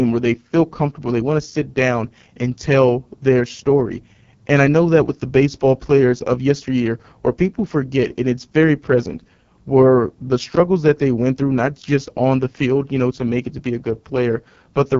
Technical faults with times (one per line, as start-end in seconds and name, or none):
0.00-14.99 AMR wideband (HD Voice) codec